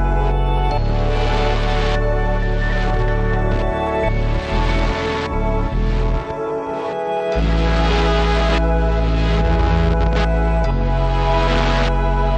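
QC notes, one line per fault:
No faults detected in this audio.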